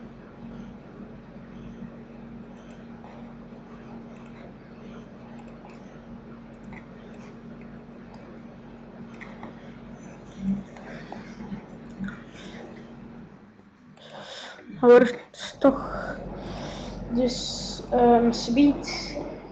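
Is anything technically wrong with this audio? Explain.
No, nothing is technically wrong: the signal has the ordinary character of audio carried over a WebRTC call path, with the coding texture and the upper limit near 8 kHz that point to an Opus codec at a moderate call bitrate.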